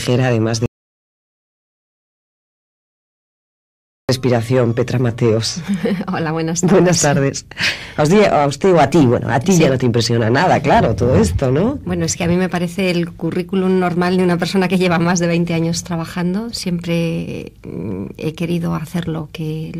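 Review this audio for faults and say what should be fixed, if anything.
Audio dropout to silence, from 0.66 s to 4.09 s: the sound cuts out abruptly and about 3.43 s of silence follows, with no room tone or noise floor underneath, before the audio resumes mid-flow. Silence that flat means the recorder kept writing silence while no signal was reaching it, most likely because the input device disconnected, a link failed or a mute was briefly engaged. Whatever occurred during that stretch is unrecoverable and would need re-recording. To prevent it, secure cables and wireless links, and monitor input meters throughout the take so a lost feed is caught immediately.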